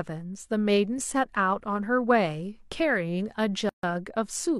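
Separately encoded pieces of this speech were joined without trimming each run's start-up delay and end padding, leaving a gap at a join of encoded pieces from 3.69 to 3.83 s. A gap of about 141 ms cuts in with smeared edges before the speech resumes where it stopped.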